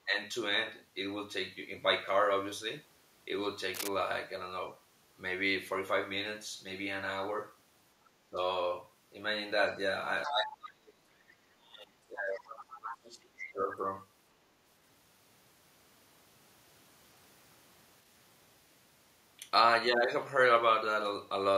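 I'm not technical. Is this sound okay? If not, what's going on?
No. From 3.73 to 3.89 s a brief scratching, rustling burst sits on top of the speech, fairly loud. That is cable scratch noise, likely a worn cable, plug or knob being moved, so its electrical contact flickers and crackles.

At 8.20 to 8.37 s, and again for about three seconds from 10.26 to 13.59 s, the speech suddenly drops away, going very faint or breaking into pieces. This is speech suppressed in double talk: likely both sides talked at once, and the call's echo-removal feature turned this talker down too.

From 10.24 to 10.29 s and 12.70 to 12.79 s, short scraps of a second, quieter voice slip through, the later one fainter. That is the other side's voice leaking through, likely from the talker's loudspeaker back into the microphone, where echo removal missed it.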